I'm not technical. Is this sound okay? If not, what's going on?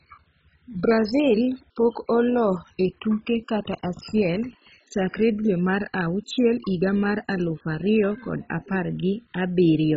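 No. The speech was likely squeezed hard by MP2 compression, an older digital radio format that splits sound into narrow slices and, when short of space, shuts off the highest ones and stores the rest roughly. Here that happens from start to finish: nothing above 7.5 kHz survives, so the speech sounds dull and muffled, and the remaining sound carries a gurgling, grainy roughness, like a weak digital radio station.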